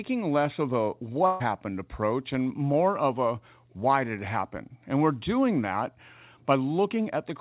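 At 1.26 s a burst of packet loss interrupts the speech and lasts until 1.42 s. About 140 ms of audio never arrived in time. The receiver covered the gap by stretching the last sound it had and letting it fade. What you hear is a brief stretch of that last sound, held and fading, where the speech should continue. The talk then picks up further along, with that stretch gone. The narrow band, with nothing above 4 kHz, fits a G.711 call path at 64 kbps.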